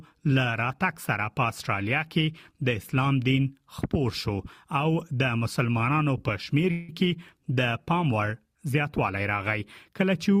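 From 6.71 to 6.90 s there's a call audio freeze, a fading buzz filling about 170 ms, likely a drained jitter buffer; nothing's lost, just pushed later.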